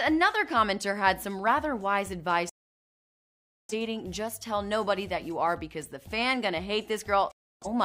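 At 2.49 s the sound cuts to silence through a fade of about 3 ms and returns at 3.74 s. A shorter hole runs from 7.31 to 7.67 s. Both are digital broadcast dropouts: the receiver muted when frames went bad. Unlike buffering stalls, the material isn't resumed; playback resumes further on.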